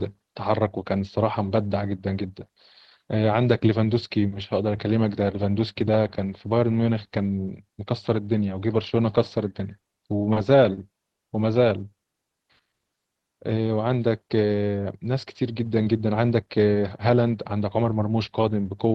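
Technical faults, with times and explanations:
9.80 to 10.37 s, repeated stalls (stutter): packets arrived late several times in a row, so the jitter buffer emptied four times within about half a second. Each gap, the longest about 30 ms, was covered by continuing the last sound, about 70 ms in total, roughly 12% of the span. Nothing is lost, but the speech catches and drags in small hitches instead of flowing evenly, which gives it a stuttering quality.
10.74 s and 11.12 to 11.19 s, short stall from a late packet: twice a packet was missing when its turn came, and the receiver held the last sound until it showed up, first for about 30 ms, then for about 60 ms. Playback then resumed exactly where it left off, so no speech is dropped. Each stall is heard as a sound sustained slightly too long, with a faint buzzy or dipping texture during the hold, and the delay grows by the same amount.
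11.84 to 14.56 s, jitter buffer slow-down: with its reserve running low or its target delay just raised, the receiver rebuilt it by repeating single pitch periods and fragments of pauses many times over, adding about 237 ms. Playback runs at about 92% of normal speed while pitch stays unchanged, so the speech sounds drawn out and slightly slowed, with stretched vowels and occasional mild warble where periods are duplicated.
16.42 to 18.75 s, jitter buffer speed-up: the buffer now held more audio than its target, so the receiver trimmed short pieces of one or a few pitch periods in succession, removing roughly 200 ms in total. Speech runs at about 109% of normal rate with pitch preserved, giving a slightly hurried, compressed delivery as the accumulated delay is worked off. The Opus call path carries the audio throughout, with bandwidth extending to about 12 kHz.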